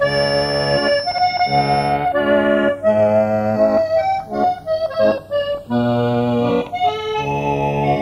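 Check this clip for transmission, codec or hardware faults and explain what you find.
Three faults are present: a clock drift between the stereo channels, a feedback whistle, and a short burst of DAB burbling.

Channels drifting apart runs through the whole clip. The two channels were captured on devices with separate clocks, differing by roughly 50 parts per million, so the delay between them creeps steadily upward, reaching a little under half a millisecond by the end. Summed to mono, that growing offset slides comb-filter notches slowly down through the spectrum, and the sound takes on a gradual, sweeping flanging.

A feedback whistle sits under the sound from 0.0 to 2.0 s: a thin, steady tone at 5.4 kHz, roughly 10 dB below the programme, swelling and fading slowly in level. The likely cause is a loudspeaker-to-microphone loop hovering right at the edge of feedback, close enough to keep that single frequency ringing but not enough for it to build and run away.

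DAB burbling hits from 5.55 to 5.67 s. Weak reception let bit errors, at a rate of a small fraction of a percent, slip past error correction into the MP2 data across nine frames. Corrupted samples put short blips of noise in single sub-bands, and corrupted scale factors make sub-bands jump in level for up to a frame, producing brief burbling over the audio.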